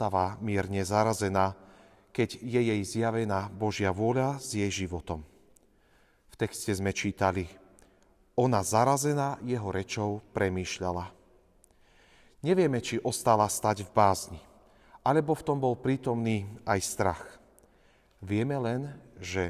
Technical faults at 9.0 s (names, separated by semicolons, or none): none